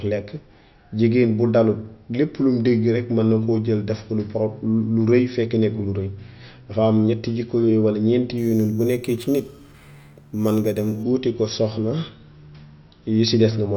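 From 8.38 to 11.03 s, ending just before "wuti ko soxna", the speech carries imaging from sample-and-hold upsampling. Each sample appears to have been repeated without a smoothing filter, which fits a 12 kHz source raised to 48 kHz. Mirrored spectrum sits in the 6 kHz to 12 kHz band at about 25 dB below the signal, heard as a metallic fizz that tracks the speech level, with the lowest image moving against the pitch.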